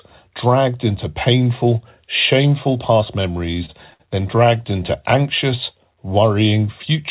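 Speech coming through a call path that sounds like narrowband G.711, with nothing above 4 kHz. Just after "into painful shameful past", from 3.22 to 4.02 s, there's a stutter from repeated stalls: packets arrived late, the jitter buffer kept running dry, and the receiver stretched the last sound across eight short holes, the longest about 62 ms. Nothing is lost, but the audio drags.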